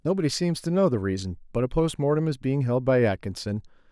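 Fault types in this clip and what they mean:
No fault of any kind can be heard in this speech clip. There is nothing to list for it.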